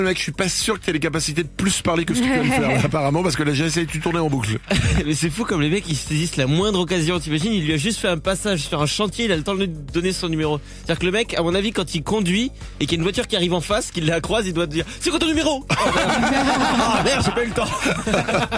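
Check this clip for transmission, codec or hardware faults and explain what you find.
No faults detected here.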